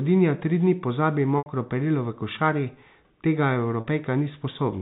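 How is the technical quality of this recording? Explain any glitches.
The recording carries telephone-band audio, with nothing above 4 kHz, consistent with G.711 mu-law coding, and has two dropouts. Packet loss with pitch repetition occurs at 1.38 s, between "tri dni pozabi" and "perilo v košari", and at 3.80 s. The receiver fills each gap of 80 ms and then 40 ms, which fits four and two 20 ms packets, by looping the last pitch cycle and fading it. The first gap fades into silence before the speech returns with a short cross-fade, while the second sounds like a brief buzzy hold before the speech resumes.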